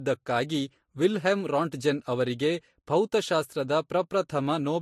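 Throughout, the speech carries transcoding between lossy codecs, likely MP3 then Vorbis, with stacked smearing and swirl. A spectrogram shows nothing above 13.2 kHz.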